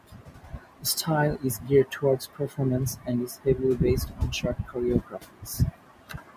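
Speech cut by the noise suppressor occurs at 0.04–0.84 s, 1.38–2.58 s, 2.95–3.46 s and from 4.09 s to the end. Quiet speech is mistaken for the room noise about 27 dB below and turned down by about 11 to 12 dB, so it sounds swallowed and faint. Unlike a dropout, it never goes fully silent.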